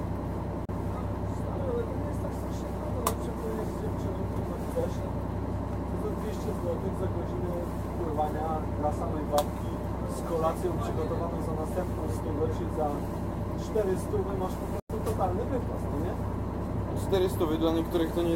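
Two digital broadcast dropouts break up this recording of sounds. At 0.65 s the audio drops to silence over a 3 ms fade and stays gone for about 32 ms, which fits one lost frame, and at 14.80 s a longer hole of about 96 ms points to three frames lost in a row. In each case the receiver muted until it decoded clean frames again, so whatever was broadcast in those gaps is missing. On a waveform each shows as a short flat gap after a steep taper, and on a spectrogram as a blank vertical band across all frequencies.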